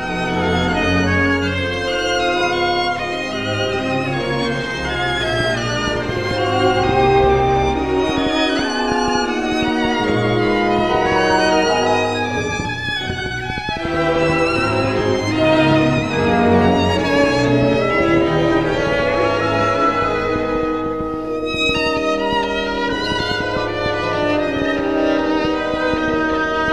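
From 5.40 s to 26.69 s a train of clicks ticks unevenly over the sound, about 4.5 per second and around 10 dB above it, even in pauses, likely from interference or a faulty connection. The waveform shows narrow, matching spikes, and the spectrogram shows thin vertical broadband lines.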